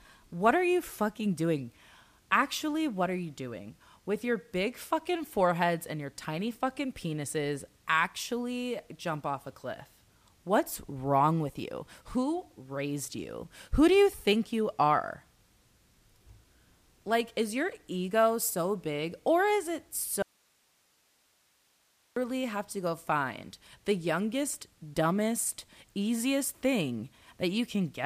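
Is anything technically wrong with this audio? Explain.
Yes, there is an audio dropout to a faint residue from 20.22 to 22.16 s, just after "big or is it", with the speech returning on "have to go find". For about 1.9 s the speech cuts out abruptly, leaving only hiss roughly 40 dB below the signal. The likely cause is a momentary loss of the source while the downstream path stayed live, so the gap carries the channel's own noise rather than silence, and the cut sounds sudden rather than like a pause or fade.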